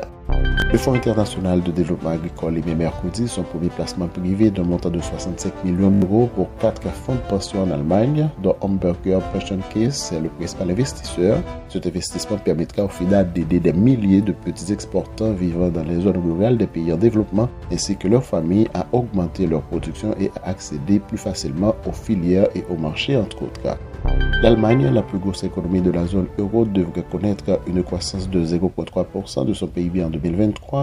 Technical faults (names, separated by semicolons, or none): repeated buffer